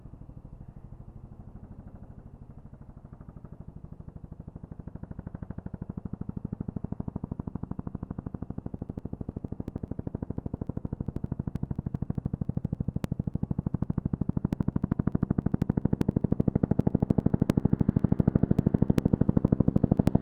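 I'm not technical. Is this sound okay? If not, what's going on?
No. From 8.79 s to 20.07 s there are periodic USB or driver dropouts: roughly a millisecond skipped every 0.099 s, heard as steady ticking, around a hundred in all.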